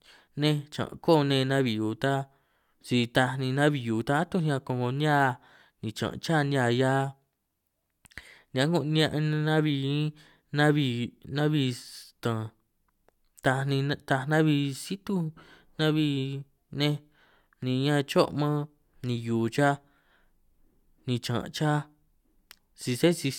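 Nothing to report: no technical faults anywhere in the speech.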